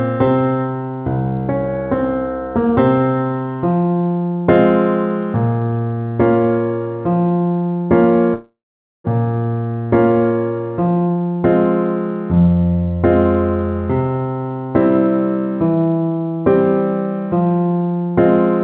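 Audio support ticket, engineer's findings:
Long network dropout, 8.34–9.06 s, likely packet loss upstream of jitter buffer: concealment fades to 0.5 s silence, 0.4 s of audio lost, delay shifts roughly 0.3 s. Band limit at 4 kHz fits narrowband G.711 A-law.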